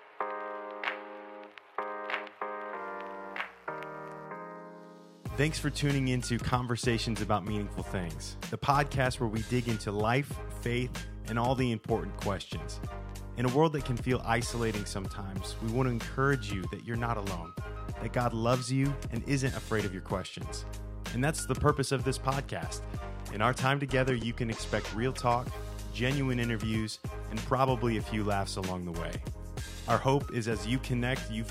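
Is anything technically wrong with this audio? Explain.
Yes. There is mains buzz from 2.76 to 4.26 s. Interference tied to a 60 Hz supply gets into the signal path, with sharp switching spikes arriving twice per mains cycle, the kind a dimmer, rectifier or poorly shielded cable lets in. Those spikes carry a dense series of 60 Hz harmonics climbing into the kilohertz range. The result is a steady, raspy buzz sitting roughly 35 dB below the main sound for that second and a half.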